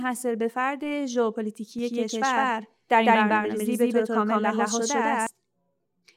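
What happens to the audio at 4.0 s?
At 4.0 s the sound is in the middle of a doubled audio track that runs from 1.79 s to 5.27 s. A second full-band copy trails the original by around 150 ms at roughly equal level, so every onset is heard twice as a dry, flamming slapback with no decay or room colour. It switches on and off abruptly at those edges, which points to a likely second capture through a slower path mixed back in.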